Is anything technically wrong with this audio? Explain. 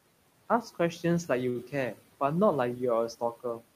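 Yes, there is one fault in the speech. From 1.49 to 1.57 s there is a short stall from a late packet. A packet arrived after it was due and the jitter buffer ran dry, so the receiver stretched the last sound for about 57 ms and then resumed where it left off. Nothing is lost, and the delay grows by the same 57 ms. It sounds like a sound held slightly too long, with a faint buzz. On a spectrogram the harmonics run flat and unchanging across that span. The waveform shows a short, regular repeating pattern with a slight dip in level. The room noise, about 21 dB below the speech, is part of the recording.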